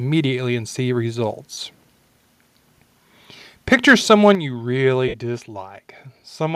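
At 1.53 s the Bluetooth LE Audio link dropped about 37.5 ms of data, which fits five consecutive 7.5 ms LC3 frames. The decoder bridged the hole by repeating the last received spectrum with randomised phase signs. For that brief span the speech loses its clear harmonic structure and turns into a short noisy smear. The gap is too short for the decoder's fade-out to pull it far toward silence.

From 3.72 to 4.31 s, just before "you really", the microphone input gain was likely set too high. Peaks drove the converter about 3 dB past its ceiling, flattening the tops of the waveform on a small share of samples. The loudest syllables in this stretch take on a harsh, crackly edge as the squared-off peaks add distortion.

At 4.35 s the call software likely responded to that overload by cutting the microphone's input gain in one step of about 7 dB. Speech and background noise both fall abruptly in level right before "you really", an audible step down that immediately follows the distorted passage rather than a gradual fade.

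From 5.08 to 5.14 s, right after "you really", a longer run of LE Audio frames went missing, about 53 ms, consistent with seven 7.5 ms frames. The concealment again reused the last spectrum with random signs, and this time the decoder had begun attenuating the repeated frames. The speech blurs into noise that thins out before normal audio resumes.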